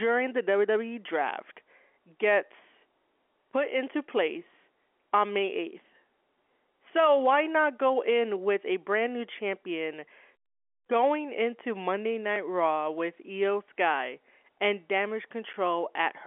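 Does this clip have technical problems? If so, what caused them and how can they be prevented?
No, no faults are present.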